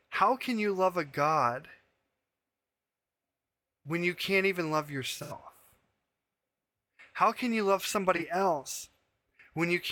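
Just after "you can't even love", from 5.19 to 5.33 s, the speech smears into a brief noisy, phasey patch, and again after "can you love" at 8.16 to 8.22 s. This is AAC frame loss with concealment: about 85 ms and 43 ms went missing, roughly two frames and one, and the decoder rebuilt them from the last good spectrum.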